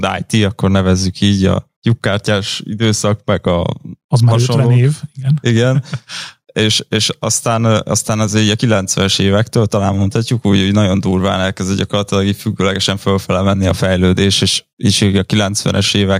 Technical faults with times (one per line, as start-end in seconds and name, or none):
0.00-16.20 gain pumping